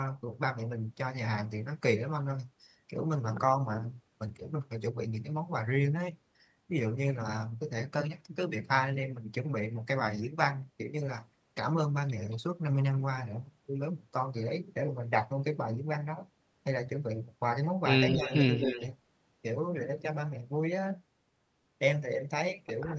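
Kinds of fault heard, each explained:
Echo leak: A delayed copy of the speech comes back twice in quick succession, at 18.1 to 18.36 s and again at 18.55 to 18.82 s, trailing the original by 219 ms, about 10 dB and then about 5 dB below it. It is likely the far end's loudspeaker sound getting past an echo canceller that did not fully remove it. Unlike room reverberation, which smears continuously, this is a distinct repeat at a fixed lag.
Speech suppressed in double talk: Inside those same two moments the main speech itself dips, by roughly 10 dB around 18.14 to 18.32 s and by a few decibels around 18.57 to 18.77 s, only a fraction of a second in all. The likely cause is an echo canceller that, with both sides active, could not separate talker from echo and turned everything down. This differs from a dropout: the level sags rather than going silent, and it lines up with the leaking echo.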